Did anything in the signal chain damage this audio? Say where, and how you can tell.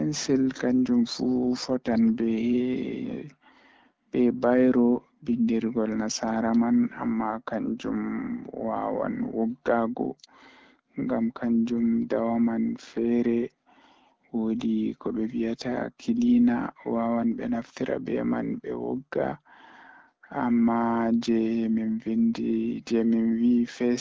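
No, no stage in the chain damaged this speech.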